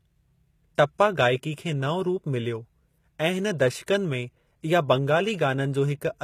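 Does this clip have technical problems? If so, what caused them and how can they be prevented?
Yes. Throughout the speech the treble has a gritty, metallic character, and s sounds come out lispy. This points to HE-AAC compression at a low rate, likely one around 20 kbps. That codec encodes only the lower spectrum and rebuilds the upper band by copying lower bands upward under a coarse envelope, so the high frequencies stay bright but their harmonics no longer line up with the real ones above the crossover. To prevent it, encode at a higher bitrate with plain AAC or another full-band codec instead of relying on band replication.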